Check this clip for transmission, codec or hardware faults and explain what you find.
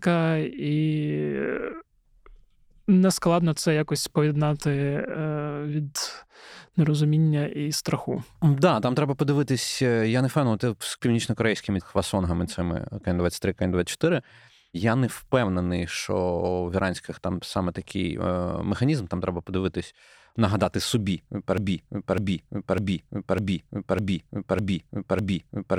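There is one fault. After "треба подивитись нагадати собі", at 21.58 s, a broken-record loop begins. The stream likely stalled. Its last 0.6 s repeats seven times to the end.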